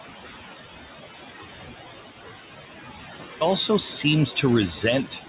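Right from the start and all the way through, you can hear noise suppressor artifacts. The suppressor is pulling the room noise down by about 13 dB in the gaps, so the background drops away between words and comes back up underneath the speech. The room noise itself sits about 11 dB below the speech, and nothing comes through above 4 kHz, which fits a narrowband G.711-style call codec.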